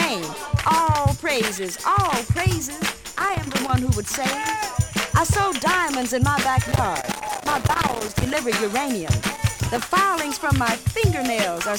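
Loose connector crackle bursts at 3.04–3.70 s, 6.64–8.43 s and 9.28–9.87 s: a moving, unreliable contact chops the signal, giving irregular scratching rather than the evenly spaced clicks of a buffer fault.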